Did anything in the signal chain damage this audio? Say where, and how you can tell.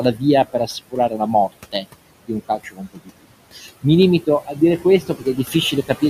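Yes, at the call-processing stage. Noise suppressor artifacts run through the whole clip: the room noise, which sits about 17 dB below the speech, is pulled down by about 21 dB between phrases and rises again under them. On a spectrogram the noise floor looks patchy and speckled, pumping frame by frame.

The same suppressor also cut speech, turning parts of it down with the background at 0.47–1.2 s, 2.48–3.25 s (just after "di un"), 3.53–3.85 s, 4.46–4.59 s and 5.01–5.55 s, with dips of about 12 to 19 dB. Those parts sound swallowed or faint. The waveform shows short notches inside words, and the spectrogram shows missing faint high-frequency energy.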